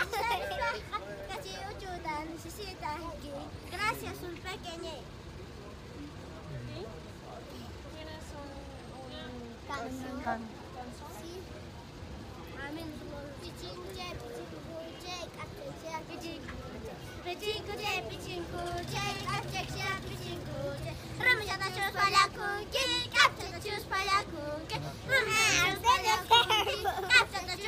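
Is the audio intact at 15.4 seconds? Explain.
Yes, at 15.4 seconds the audio is intact, with no dropout, click, distortion or other fault to be heard at that moment.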